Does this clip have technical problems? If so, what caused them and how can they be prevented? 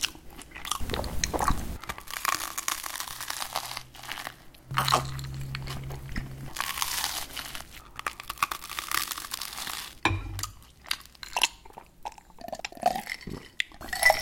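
Yes. Between 12.4 and 12.8 s the audio has chunks out of order: one 200 ms chunk arrived or was written one chunk late, so it plays after the chunk that should follow it. Nothing is missing, but the two segments are swapped, leaving a brief jumbled moment with three hard joins where unrelated waveform edges meet. Reordering chunks by sequence number in a jitter buffer before playback or writing prevents this.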